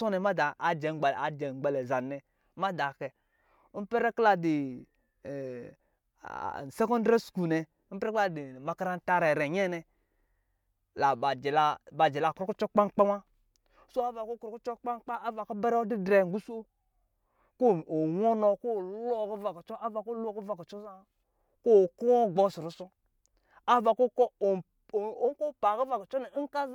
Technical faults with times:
none

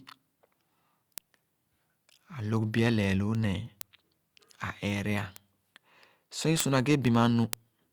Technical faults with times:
0.25-7.84 word clock ticks

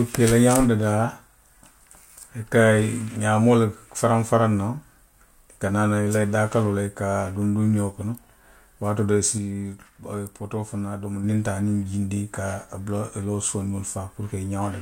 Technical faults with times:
9.38-11.24 sudden gain jump

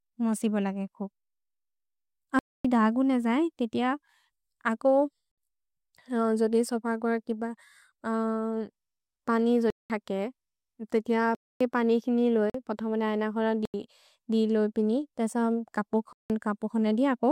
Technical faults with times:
2.39-2.65 block of digital silence
5.31-5.38 block of digital silence
9.70-9.90 block of digital silence
11.35-11.61 block of digital silence
12.50-12.54 block of digital silence
13.65-13.74 block of digital silence
16.13-16.30 block of digital silence

